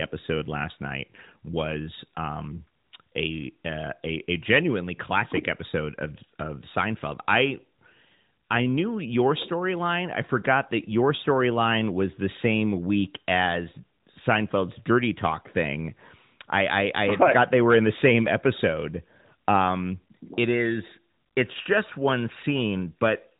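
No faults found in this speech; the band stops at 4 kHz with the light synthetic edge of the AMR narrowband mobile codec, consistent with its 12.2 kbps mode.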